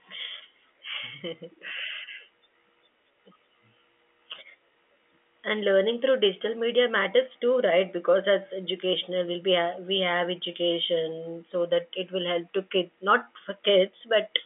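Speech carried over G.711 telephone coding, band-limited to about 250 Hz to 3.5 kHz with nothing above 3.7 kHz, and no technical faults to report.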